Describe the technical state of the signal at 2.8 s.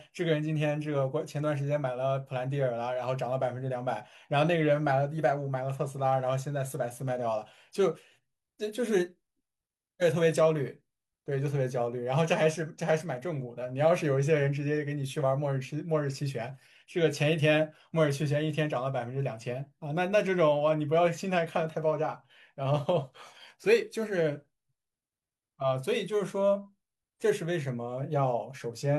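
At 2.8 s the speech signal is intact, with no audible fault at that moment.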